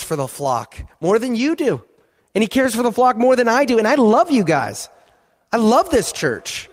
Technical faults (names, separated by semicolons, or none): none